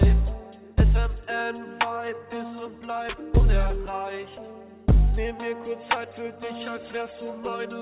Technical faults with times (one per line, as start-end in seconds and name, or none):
none